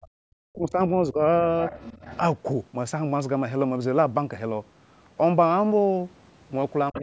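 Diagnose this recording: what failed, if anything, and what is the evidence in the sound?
Call processing, at the echo canceller, is the likely failing stage: with both ends talking at once, it could not tell the local talker apart from loudspeaker echo, so it pulled the whole microphone signal down. The result is speech suppressed in double talk. The speech dips at 0.00 to 0.08 s and 0.51 to 0.79 s, by roughly 30 dB at the deepest. Shallower dips follow at 1.02 to 1.21 s (around 10 dB) and 6.91 to 6.95 s (around 15 dB), each audible as a brief hole or fade.

The same echo canceller likely also failed to remove everything the loudspeaker fed back into the microphone, so the other side's voice leaks through. A second, quieter voice sits roughly 20 dB below the talker from 1.66 to 2.18 s, and again from 6.94 s to the end of the clip. The leak is heard as a faint secondary voice.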